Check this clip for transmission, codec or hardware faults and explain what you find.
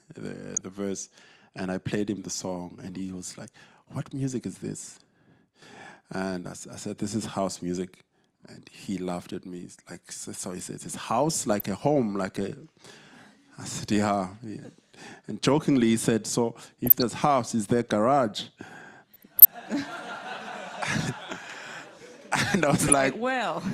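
DAB burbling occurs in six short bursts: 0.55–0.63 s, 3.15–3.24 s, 11.50–11.79 s, 16.86–17.04 s, 19.13–19.53 s and 22.79–22.93 s. Weak reception lets bit errors, a fraction of a percent, slip past error correction into the MP2 data. Corrupted samples put short blips of noise into individual sub-bands, and corrupted scale factors make sub-bands leap in level for up to a frame. The result is bubbling, watery blips laid over the audio, longest around 19.1–19.5 s.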